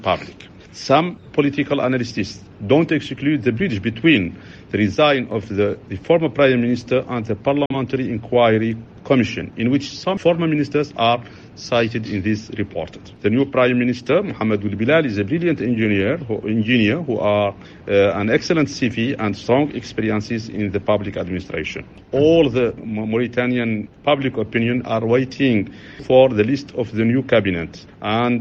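A digital broadcast dropout hits the audio from 7.66 to 7.75 s. The receiver lost a frame or rejected it on checksum and muted, fading out over 3 ms. About 43 ms of programme, which fits a single lost frame, simply vanishes before sound resumes.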